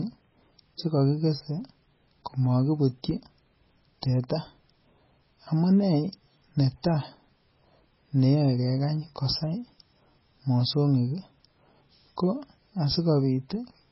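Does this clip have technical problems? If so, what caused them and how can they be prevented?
Yes. Throughout the speech, everything above 5.6 kHz is gone, and what remains sounds watery and swirly, with smeared consonant attacks, most likely from heavy MP3 compression at a bitrate that fits about 16 kbps. A plain low-pass filter would dull the sound without that flickering, swirling texture. To prevent it, encode at a much higher bitrate or keep a lossless copy.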